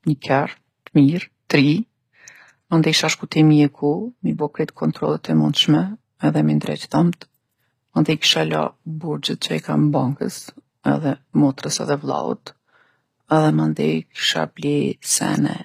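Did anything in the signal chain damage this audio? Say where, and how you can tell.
Yes. At the codec stage, throughout the speech, the treble sounds bright but synthetic: s sounds come out gritty and metallic, and nothing reaches above 15.5 kHz. This is likely HE-AAC compression. Spectral band replication copies lower bands upward under a coarse envelope, so the high harmonics don't line up with those below the crossover. A plain low-pass would leave the top dull rather than bright. The damage is plainly audible, which fits a low bitrate around 24 kbps.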